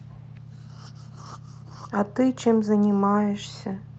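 No technical faults occur in time order or otherwise, since the speech carries only the ordinary character of its call path.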